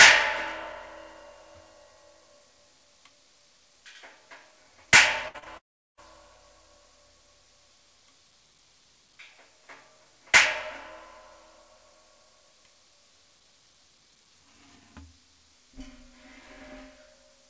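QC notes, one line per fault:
throughout: DC offset. Nothing about it is audible. The whole waveform sits shifted away from zero by a constant amount, so it shows up only as steady energy at the very bottom of the spectrum and as lost headroom on one side of the signal. The call microphone's high-pass filter, which works normally here, removes the lowest bass. That does not cancel the offset, which is still present in the clip.
5.28 to 5.36 s: burst of packet loss. The last sound is carried on for about 63 ms and turned down as it goes, before the real audio returns. About 60 ms of the original never plays, so the sound picks up slightly further on than where it broke. This happens because a short run of packets was lost or arrived too late, and the receiver had to invent the gap by extending what it last had.
5.38 to 5.44 s and 5.44 to 5.48 s: short concealed packet loss. Right after the burst there are two brief smears, one filled for about 39 ms and the next for about 15 ms, each blending back into real audio. 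About 40 ms and 20 ms of the original are missing. In each case a few hundredths of a second failed to reach the decoder in time. The receiver patched the hole by continuing the preceding sound, which blurs the sound and can drop a short transient.
5.58 to 5.99 s: long network dropout. The sound continues briefly, then falls to about 380 ms of silence within a gap of about 400 ms, which was filled for 399 ms in total. The audio resumes without the missing stretch. The likely cause is a long interruption in which no packets arrived, so the receiver's continuation faded out and left silence until data came back. The 8 kHz bandwidth limit of the G.722 call path is normal and is not part of this fault.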